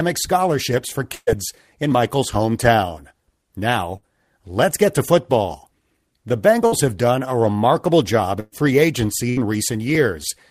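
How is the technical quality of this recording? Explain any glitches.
The speech is interrupted by five bursts of packet loss, at 1.15 s, 3.97 s (just before "let's get to football"), 6.67 s (just before "have done a remarkable"), 8.40 s (after "done a remarkable job") and 9.30 s. Runs of packets arrived too late or not at all, so the receiver stretched the last sound and faded it out. Each gap becomes a brief held buzz or fading hiss, and the speech then resumes further on. About 60 ms is missing at 3.97, 6.67 and 9.30 s, and about 120 ms at 1.15 and 8.40 s, where the fill decays into a short silence.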